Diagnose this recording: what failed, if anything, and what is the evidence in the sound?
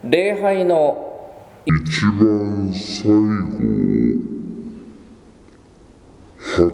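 At 1.69 s the sound abruptly drops and drags: from there to the end it plays at 0.531 times its proper speed, roughly ten semitones low, with pitch and tempo sinking together. This is a section at the wrong speed. The lockstep shift of pitch and timing points to a clock mismatch at the editing or playback stage, likely a segment rendered against the wrong sample rate, so it is stretched to nearly twice its length.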